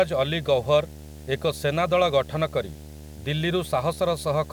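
Speech runs with video or display buzz throughout, a rasping 75 Hz buzz with hash above it sitting roughly 20 dB under the voice, as a screen or video cable couples in. The 75 Hz field rate, not 50 or 60 Hz, separates it from mains hum.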